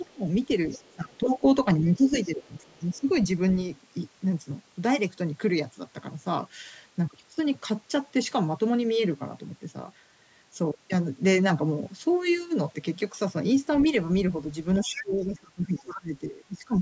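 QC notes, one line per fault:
0.04–3.00 s and 13.82–15.80 s, other side's voice leaking through: a second, fainter voice appears at 0.04–0.13, 0.71–1.18, 1.84–3.00, 13.82–13.89 and 14.96–15.80 s, sitting roughly 40, 25, 30, 20 and 10 dB below the main talker. It is likely loudspeaker playback of the far end that the echo canceller failed to fully remove from the microphone. It is most audible in the last stretch, where it comes within about 10 dB of the talker.
0.06–3.08 s and 14.81–16.81 s, speech suppressed in double talk: the talker's level dips while the far-end voice is present, for about 1.5 s in total within each span. The deepest drop is around 15 dB in the first span and around 25 dB in the second. The likely cause is the echo canceller treating the overlap as echo and attenuating both voices together.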